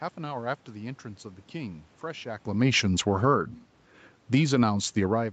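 A speech recording over a call link with two automatic gain faults. From 2.6 to 3.4 s, automatic gain falling pulls the level down by about 5 dB. Voice and room noise sink together, which marks it as gain control rather than the talker moving, as happens around 2.5 s. From 3.31 to 3.68 s, automatic gain rising lifts the level by about 3 dB over a shorter swell. Again the background climbs along with the voice, so the microphone distance is not what changed.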